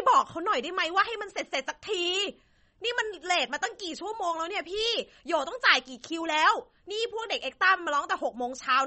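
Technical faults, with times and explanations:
Throughout, MP3 compression: the speech is band-limited with nothing above 8.3 kHz, and codec damage is plainly audible, most likely from MP3 encoding at a starved bitrate, which fits around 32 kbps. Short of bits, the encoder cuts the treble at a fixed point and drops weak frequency lines, giving a dull, watery sound. A spectrogram shows a flat, hard ceiling at 8.3 kHz, with sparse, patchy energy beneath it.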